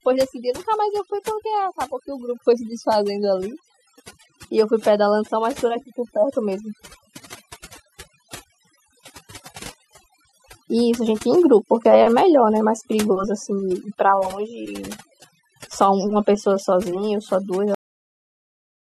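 A noise reduction stage set far too aggressively is working on this speech recording throughout: overdone noise removal that pulls individual frequency bands down to nothing whenever they sit near its noise estimate, taking the quieter parts of the voice with them. The result is a lowered background scattered with twinkling specks. At 17.75 s the recording has a cut-off end: the final buffers were never written, so the voice stops mid-sound and drops straight to digital silence with no decay for the remaining 1.25 s.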